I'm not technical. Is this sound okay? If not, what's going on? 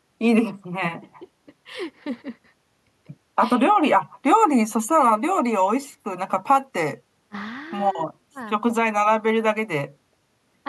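Yes, no faults heard.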